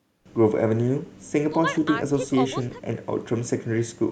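At 0.26 s there is a sudden gain jump. The level rises by about 24 dB in a single step and stays there to the end of the clip. The speech and the background noise get louder together, so the noise floor leaps up at the same instant. Nothing fades in. The change is abrupt. This is likely a digital gain setting or bit shift applied from one sample to the next without any ramp.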